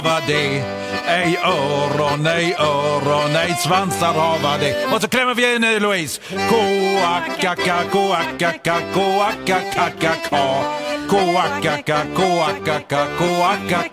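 No technical faults can be heard anywhere in the audio.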